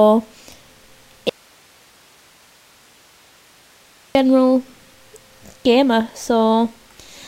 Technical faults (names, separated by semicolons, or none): audio dropout to a faint residue